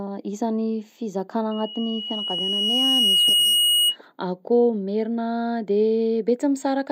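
At 1.51 s a loudspeaker feedback squeal starts: the mic hears its own speaker, and a 2.9 kHz tone swells over roughly two seconds, ending about 5 dB above the speech at 3.96 s.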